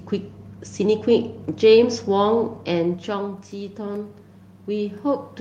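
Automatic gain rising, 4.66 s to 5.4 s: after the input fell about 9 dB, the gain control gradually boosted it, swelling speech and room noise together.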